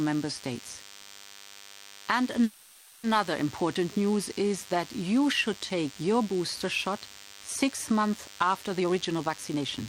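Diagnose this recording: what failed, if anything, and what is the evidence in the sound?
A nearby DECT cordless phone or base station is coupling into the analogue audio circuitry, which rectifies its radio bursts. The result is a DECT cordless phone buzz present for the whole recording: a thin, steady 100 Hz buzz rich in harmonics, sitting roughly 20 dB below the speech. The 100 Hz repetition matches the 10 ms burst spacing of DECT transmission, so the tone never changes with the talker.

From 2.43 s to 3.05 s there is a call audio freeze, likely caused by packets being held up in the network until the receiver's jitter buffer ran dry. The receiver filled the wait by stretching the last sound into a fading buzz or hiss for about 600 ms, with no drop to silence. The speech then resumes intact with "important news is that". Nothing is lost, but the call is now 600 ms further behind.

From 8.79 s to 9.64 s, just after "shot six months after", a jitter buffer speed-up occurs in the receiver's call processing. 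The buffer was holding more audio than its target, so it repeatedly cut out short pitch-period-sized pieces, around 300 ms in total. The speech plays at 128% speed without any change in pitch, so this stretch sounds noticeably hurried and clipped together.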